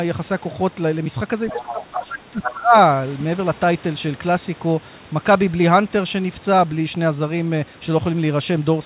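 At 1.47 to 1.62 s a second voice sits under the speech, about 15 dB below it. This is the other side's voice leaking through, likely loudspeaker echo that the echo canceller failed to remove from the microphone. It is an added voice, not a change to the talker's own level.

Starting at 1.5 s and running to 2.75 s, the talker's speech is pulled down in pieces, for about 1 s in all, dropping by as much as roughly 20 dB. This is speech suppressed in double talk, likely the canceller turning the talker down because it could not separate them from the loudspeaker echo. It differs from a network dropout because the dips fall during the same stretch as the leaked voice, and that leaked voice is not turned down with the talker.

The leaking voice returns at 2.05 to 2.18 s, about 10 dB below the speech, and again at 2.42 to 2.51 s, about 5 dB below. Each return is closer in level to the talker than the one before. 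All of this plays within a band that ends at 4 kHz, which fits a 64 kbps G.711 call path.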